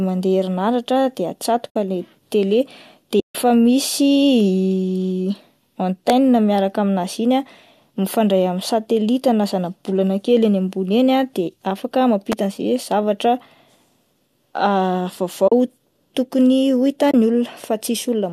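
AAC frame loss with muting cuts soft-edged holes into this speech recording at 1.70–1.75, 3.20–3.35, 15.48–15.52 and 17.11–17.14 s. The decoder zeroed the missing frames, so the overlapping windows fade the sound out and back in. Electrical switching spikes at 6.10 and 12.32 s add sharp snaps or tight clusters of clicks on top of the speech, likely arcs from a nearby switch or motor picked up by the audio line. Underneath, the low-delay AAC compression, likely AAC-ELD, adds only a light graininess.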